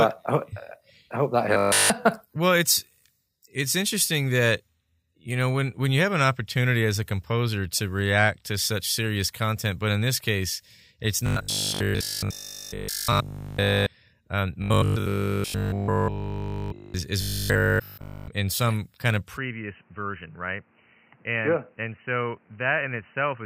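Audio likely arriving too seldom, with the last 20 ms or so repeated in its place, causes robotic sound from repeated short buffers at 1.54–1.90 s (after "I hope that"), 11.26–13.86 s, 14.62–16.94 s and 17.22–18.28 s (before "in some kind of"). Each stretch becomes a rigid, metallic 50 Hz buzz. From 19.37 s to the end, after "in some kind of", the input likely switched to a poorer device. With no gap, the sound turns dull and boxy. It becomes slightly quieter, with a faint new noise floor.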